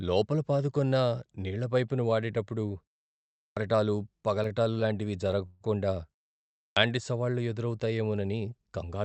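Speech over what sounds like an Opus call path, with the top end rolled off around 8 kHz. Two words come in with a clipped start after a pause, at 3.38 s and 6.58 s. Each time, after roughly half a second of quiet, about 190 ms of the onset is swallowed while the output device wakes back up. At 4.48 there's a short stall from a late packet: the jitter buffer ran dry and the sound is held about 19 ms too long, leaving a slight buzz or dip with nothing actually lost. From 5.46 to 5.62 s there's a call audio freeze, where the last sound is stretched into a fading buzz or hiss for about 143 ms before the audio resumes right where it stopped. The likely cause is packets held up in transit.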